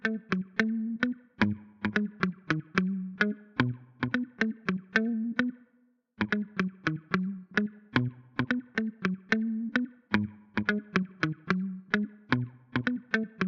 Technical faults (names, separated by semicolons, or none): dropped samples